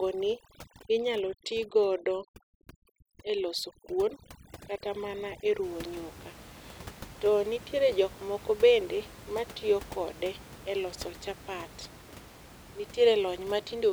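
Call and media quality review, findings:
Overdone noise removal, 0.0 to 5.63 s. Background drops and breaks up into twinkling specks. Quiet syllable tails vanishing. Noise suppressor set too strong: single bands are cut hard or gated off whenever they sit near the noise estimate, taking low-level speech with them. Unlike codec smearing, the artefacts follow the noise floor rather than signal level. Past 5.63 s the steady room noise returns, about 20 dB below speech.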